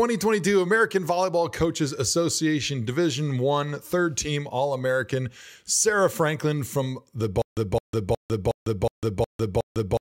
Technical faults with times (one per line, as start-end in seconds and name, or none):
7.42-10.01 stutter with silent gaps